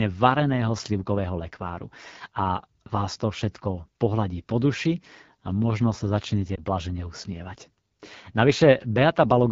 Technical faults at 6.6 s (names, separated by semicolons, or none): AMR wideband (HD Voice) codec; lost AMR speech frames